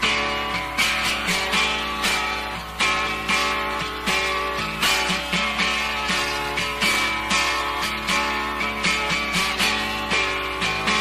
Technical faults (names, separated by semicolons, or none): none